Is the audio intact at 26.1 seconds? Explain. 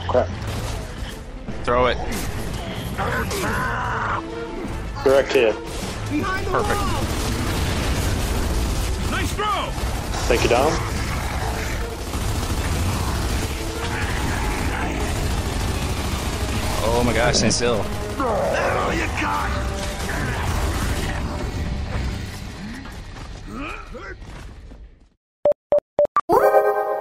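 No: from 26.07 to 27.01 s, audio is read two samples at a time, doubling the speed; the sound runs twice as fast, an octave higher.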